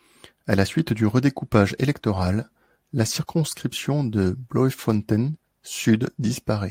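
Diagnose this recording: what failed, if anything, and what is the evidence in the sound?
No fault found at any stage.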